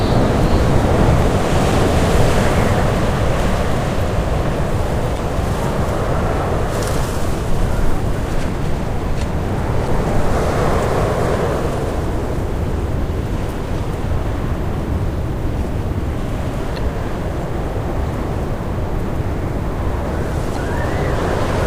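A sudden voltage step, most likely from a plug, switch, static discharge or driver glitch, entered the signal path at 1.22 s. It produces a single loud pop, peaking roughly 10 dB above the surrounding sound. This is a brief, sharp impulse that the following circuitry shapes into a short thump, while the underlying audio continues unbroken beneath it.

The compressed stream then carries damaged data at five points: 1.69–1.73 s, 5.15–5.19 s, 9.85–9.89 s, 16.74–16.78 s and 20.53–20.57 s. Each time, corrupted bytes cause the decoder to misread the affected frames and lose sync until it finds the next valid frame header. Each event lasts about 40 ms and sounds like a short chirp or squawk.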